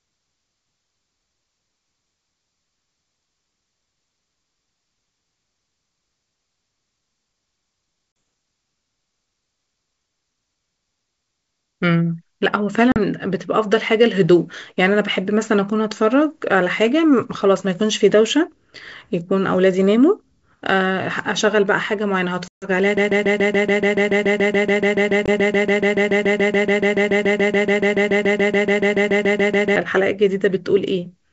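A speech recording carried over wideband G.722 telephone coding, whose upper band stays clear to about 7 kHz, with two kinds of fault. First, there is packet loss on an ADPCM call: hard-edged silent holes at 8.12–8.16 s, 12.92–12.99 s, 22.48–22.68 s and 25.26–25.29 s, each followed by some distortion. Lost audio was replaced by silence, losing about 40, 40, 140 and 20 ms, and the decoder's adaptive predictor and step size drifted from the sender's until they resynchronised. Second, from 22.97 to 29.76 s a broken-record loop repeats a single 0.14 s fragment 48 times back to back, losing everything that should have played then, likely because the stream stalled and kept resending its last buffered piece.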